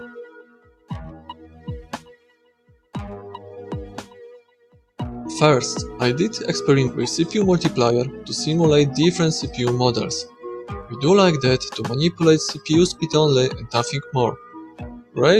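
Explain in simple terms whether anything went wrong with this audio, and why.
Noise suppressor applied to music or sounds, throughout: a speech-cleaning filter was left switched on for this audio. It mistakes steady tones, lingering tails and room ambience for background noise and turns them down, while sharp onsets slip through. The level keeps dipping and recovering, so the sound pumps and thins in a way the original wouldn't, rising and sinking as the filter changes its mind about what counts as noise.

Sound cut by the noise suppressor, at 0.17 to 0.91 s, 1.16 to 1.68 s, 1.93 to 2.94 s, 4.06 to 4.99 s, 10.25 to 10.44 s, 10.62 to 10.96 s and 14.36 to 15.18 s: in these stretches the same filter pushed the sound down harder than elsewhere. Held or fading parts sink noticeably or have their decay chopped short, sometimes for most of a second, as at 1.93 s and 14.36 s, so they seem to drop away suddenly.

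Skip ahead, at 6.87 to 6.89 s: roughly 0.4 s of audio never gets played. That stretch was dropped while later audio was already waiting, so playback jumped straight to what came next. There is almost no silence at the join. The two sides are simply butted together, so the sound lurches forward abruptly.

Jitter buffer speed-up, from 7.45 to 8.08 s: just after that jump, the receiver still had more audio waiting than it wanted. To catch up, it quietly removed many tiny slices, about 50 ms in total, without changing the pitch. For those six-tenths of a second the audio runs about 7 percent fast, so it sounds slightly hurried and its timing is uneven.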